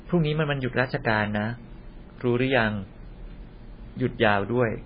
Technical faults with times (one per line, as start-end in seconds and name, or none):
0.00-4.86 MP3 compression